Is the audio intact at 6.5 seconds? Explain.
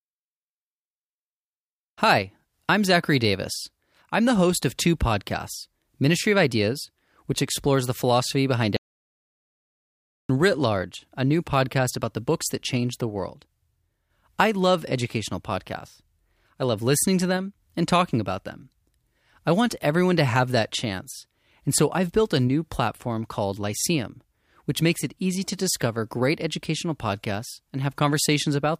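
Yes, the speech at 6.5 seconds is intact, with no dropout, click, distortion or other fault at that moment.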